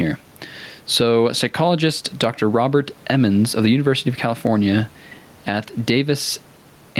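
Speech with gain pumping throughout: the room noise, sitting about 38 dB below the speech, swells in every gap and ducks by roughly 10 dB under each loud syllable, likely from excessive mic gain driving a fast limiter.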